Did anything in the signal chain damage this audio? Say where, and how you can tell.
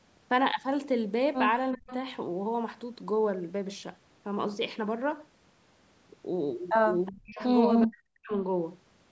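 Yes. Speech suppressed in double talk, at 1.76–1.9, 7.1–7.4 and 7.86–8.31 s: the waveform collapses by roughly 35–40 dB, likely the call echo canceller ducking both talkers.

Echo leak, at 1.87–2.0, 7.06–7.12, 7.31–7.38 and 7.82–7.86 s: faint speech repeats 374 ms late, about 15–25 dB down, showing as ghost spectrogram traces, likely from the canceller's residual.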